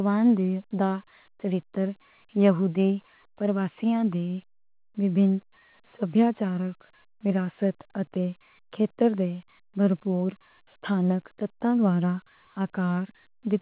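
Nothing goes wrong anywhere in this speech clip; all you really notice is the narrow, phone-like band from the call path, with nothing above 4 kHz, which fits G.711 A-law at 64 kbps.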